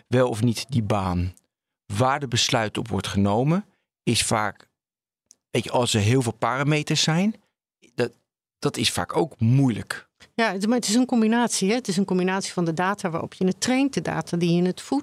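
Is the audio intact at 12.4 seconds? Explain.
Yes, the audio is intact at 12.4 seconds, with no fault at that moment.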